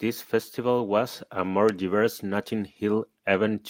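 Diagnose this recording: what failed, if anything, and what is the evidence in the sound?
Nothing failed in this speech recording, and no stage of the chain shows a fault. No dropout, distortion or discontinuity can be heard anywhere to point at a broken path.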